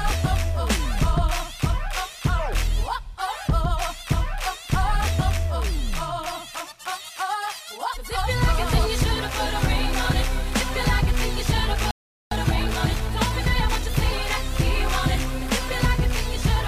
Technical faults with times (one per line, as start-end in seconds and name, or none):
11.91-12.31 playback stall
12.31-13.91 time-compressed catch-up